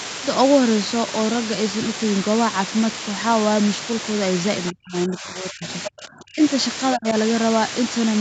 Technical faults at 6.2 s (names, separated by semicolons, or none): low bit depth with dither; speech suppressed in double talk